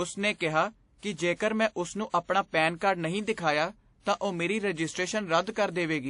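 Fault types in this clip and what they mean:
Transcoding between lossy codecs: the speech shows two layers of compression damage at once, with smeared, swirly artefacts overlaid by a second coder's own, and nothing above 10.6 kHz throughout. This most likely fits a low-bitrate MP3 re-encoded to WMA.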